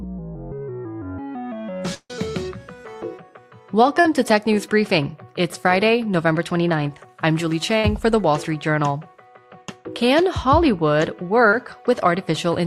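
At 1.94 s a gap of about 0.16 s opens, most likely a long network dropout. The last sound is carried on as a fading buzz or hiss that ends in about 50 ms of silence, and about 150 ms of audio is never heard. A spectrogram shows smeared, decaying energy and then a blank band before the sound resumes.

From 4.00 to 4.06 s and again at 11.50 to 11.53 s comes short concealed packet loss. About 40 ms and then 20 ms of audio never reached the decoder, and the receiver bridged each hole by extending what came just before. Each is heard as a brief smear or wobble, and a spectrogram shows a short stretch of copied, blurred texture.

From 7.79 to 7.84 s a burst of packet loss removes about 50 ms of audio. The receiver continues the preceding sound and lowers its level across the gap, so it is heard as a quick held buzz or hiss before playback jumps forward. The waveform shows a tapering envelope at that point.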